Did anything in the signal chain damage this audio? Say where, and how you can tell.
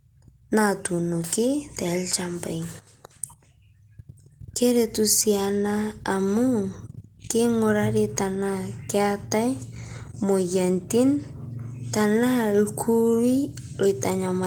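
No, nothing in the signal chain stood out as damaging this speech on listening.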